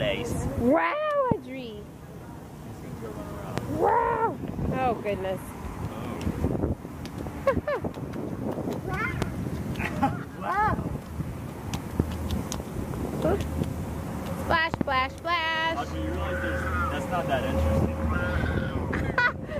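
Loud pops strike at 1.32, 3.58, 9.22 and 12.00 s, each about 25 ms, plus a double pop from 14.74 to 14.83 s. They peak roughly 20 dB above the sound, likely from voltage pulses such as switching or static, and show as waveform spikes and thin full-height spectrogram stripes.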